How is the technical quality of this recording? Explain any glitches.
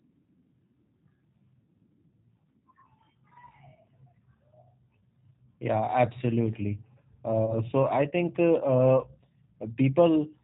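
The recording has audible degradation from a narrowband speech codec throughout and one brief dropout near the end.

G.729 codec damage runs the whole clip. The sound points to G.729A at about 8 kbit/s. The codec rebuilds the speech from a vocal tract filter model, a pitch predictor and a few pulses per frame. Nothing above 4 kHz survives, so the speech sounds muffled, slightly rough and synthetic.

VoIP packet loss concealed by the speech codec occurs from 7.46 to 7.55 s. The gap fits a single lost 20 ms packet. The decoder covered the missing audio by extending its last pitch and filter state at falling gain. This produces a short stretched smear that fades, and the speech stays weakened until about 7.55 s while the decoder recovers.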